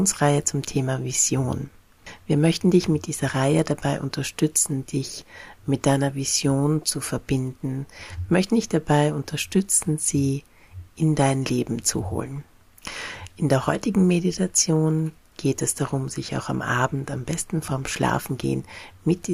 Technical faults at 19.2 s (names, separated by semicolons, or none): none